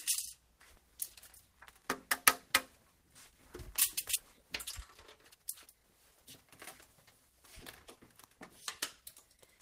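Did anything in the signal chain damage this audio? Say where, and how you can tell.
Yes, a skip ahead at 4.15 s. Playback jumps straight forward with no gap filled in, so roughly 0.7 s of sound is missing. This happened at the network or jitter-buffer stage: audio was lost or discarded while later packets were already queued.

Jitter buffer speed-up from 5.3 to 7.42 s. The sound runs at about 113% speed while keeping its pitch, because the receiver repeatedly cut out short pitch-period slices, around 0.3 s in total, to drain excess buffered delay.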